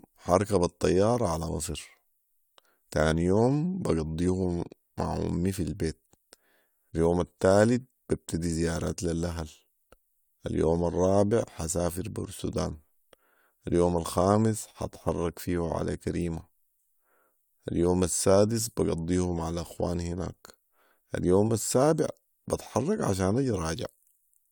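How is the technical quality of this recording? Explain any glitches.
No glitches or technical faults can be heard anywhere in the recording; the speech signal stays continuous and intact throughout.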